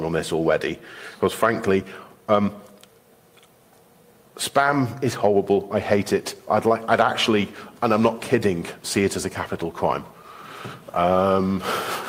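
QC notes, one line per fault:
No faults found on this pass.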